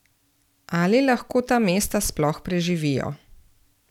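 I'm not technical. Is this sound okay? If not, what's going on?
Yes, no faults to hear.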